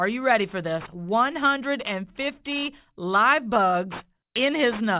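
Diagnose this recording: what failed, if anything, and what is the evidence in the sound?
The sample-rate conversion failed: the rate was cut without an anti-aliasing filter first, which fits a drop from 48 kHz to 8 kHz. Everything above the new 4 kHz limit folded back into the band as unrelated tones, sitting roughly 20 dB below the speech for the whole clip. The result is aliasing: sibilants sound gritty and metallic, and the spectrum stays hot right up to the 4 kHz edge instead of rolling off.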